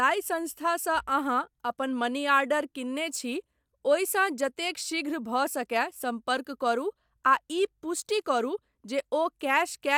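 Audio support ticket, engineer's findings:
No faults found on listening; speech path behaves as expected throughout, nothing to attribute to any component.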